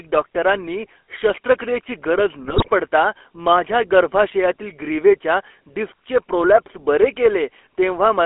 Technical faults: GSM full-rate codec; GSM bit errors

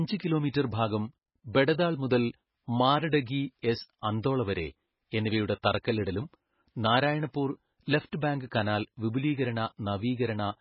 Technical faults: MP3 compression

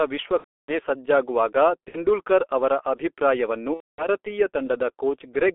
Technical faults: G.723.1 codec; VoIP packet loss concealed by the speech codec

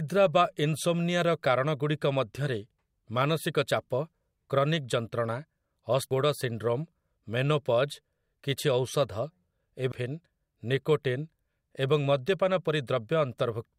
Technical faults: damaged data in a compressed stream

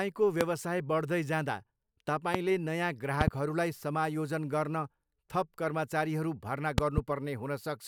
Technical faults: loud pop

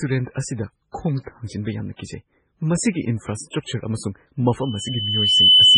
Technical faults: MP3 compression; pre-echo; loudspeaker feedback squeal

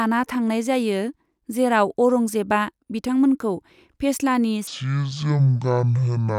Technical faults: section at the wrong speed

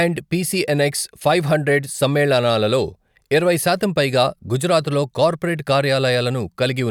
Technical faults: none

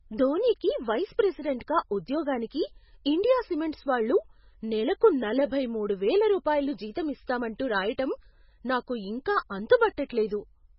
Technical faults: MP3 compression

